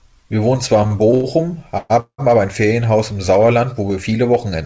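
From 0.84 to 1.26 s the speech stutters. These are repeated stalls (stutter). Packets arrived late, so the jitter buffer emptied four times in that stretch. Each time, the receiver stretched the last sound to bridge the wait. About 157 ms was filled this way, the longest gap 93 ms. That is 38% of the span. Nothing is lost, but the speech drags and catches.

At 1.78 to 1.92 s the sound hangs as a smeared buzz for 120 ms, then resumes. At 2.00 to 2.20 s it happens again, for 187 ms. The held sound fades, then drops to about 90 ms of silence. Both are a call audio freeze, likely from packets held up in transit. The speech picks up where it stopped, now running later. Throughout, nothing is heard above 8 kHz, which fits a wideband call codec.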